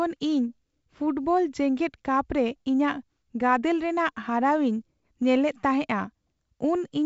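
Nothing here counts as a fault: the speech comes through a G.722 wideband telephone link at 56 kbit/s, which explains why nothing is left above about 7.7 kHz and why there's only the light coding texture you'd expect from that path.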